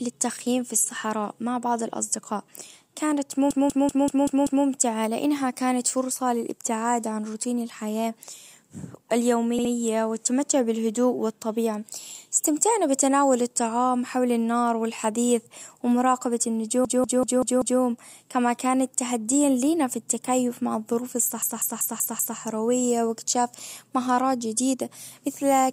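Repeated frames make the speech stutter at 3.50–4.66 s (a 192 ms block replayed six times), 9.58–9.71 s (a 64 ms block twice), and 16.85–17.81 s and 21.42–22.38 s (192 ms blocks, five times each). Unlike dropouts, nothing goes missing; each repeat adds time.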